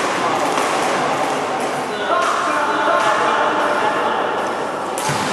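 Right from the start and all the way through, there's a doubled audio track: a second, full-band copy trails the original by around 0.7 s at roughly the same level, with no decay or room colour. It's likely from a slower second capture path.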